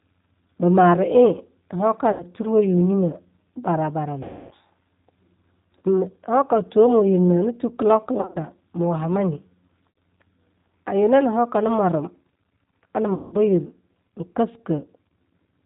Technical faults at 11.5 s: G.729 codec

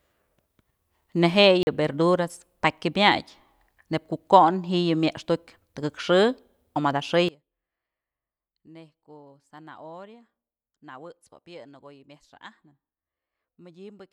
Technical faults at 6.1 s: none

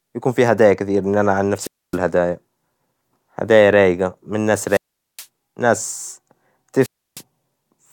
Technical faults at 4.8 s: wireless microphone squelch dropout

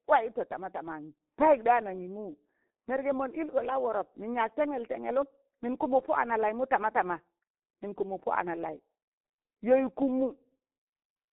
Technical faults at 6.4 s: G.723.1 codec

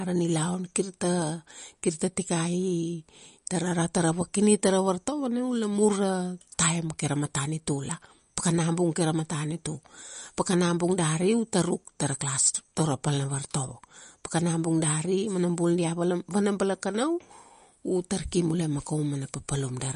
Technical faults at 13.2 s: MP3 compression

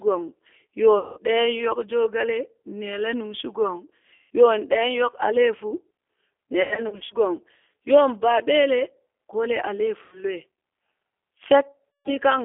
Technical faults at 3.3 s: G.729 codec

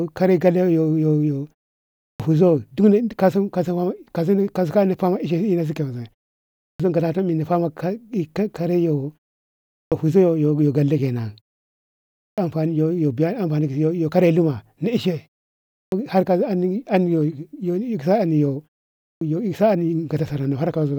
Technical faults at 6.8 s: clipped start after a pause

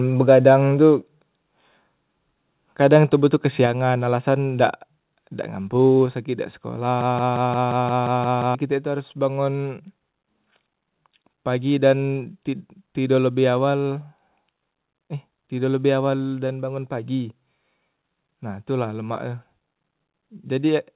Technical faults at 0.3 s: none

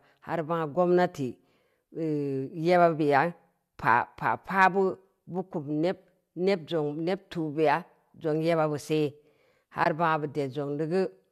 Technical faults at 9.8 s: AAC frame loss with muting

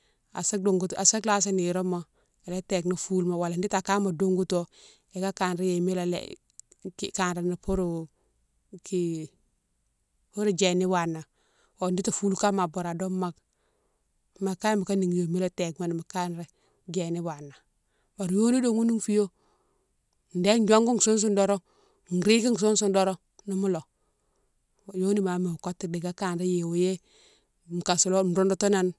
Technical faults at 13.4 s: none

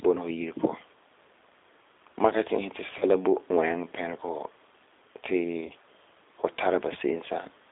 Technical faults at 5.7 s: G.729 codec; VoIP packet loss concealed by the speech codec

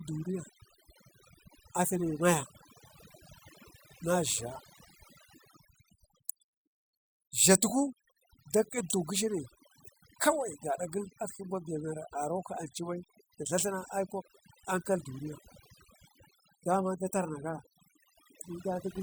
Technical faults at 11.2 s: overdone noise removal

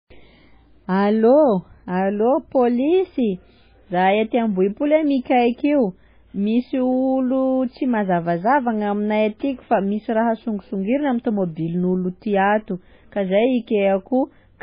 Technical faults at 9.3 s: low-bitrate audio saved at a high bitrate

